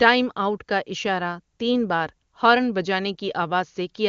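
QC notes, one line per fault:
No faults found; the speech shows at most faint AMR wideband (HD Voice) coding, consistent with one of the codec's higher rates.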